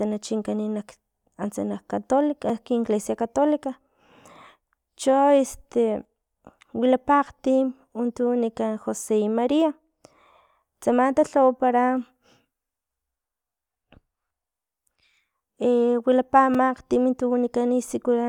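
In this speech recording, the audio output likely twice failed to deliver samples in time, and the missing stretch was filled with zeros, creating a block of digital silence each time. At 2.50 s the gap lasts about 1.3 ms, which fits a 64-sample block. At 16.54 s it lasts 4.0 ms. Because the sound drops straight to zero and jumps back with no fade, each hole is heard as a tick or dip rather than a pause.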